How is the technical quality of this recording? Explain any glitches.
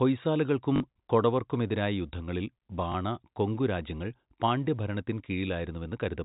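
A brief stutter and a small blip disturb the speech, which is carried in the 4 kHz telephone band of G.711 coding. At 0.76–0.80 s (40 ms, fitting two 20 ms packets) and 2.92–2.94 s, packet loss with last packet repeated produces a short robotic stutter and then a small blip. The waveform shows copied blocks at each loss.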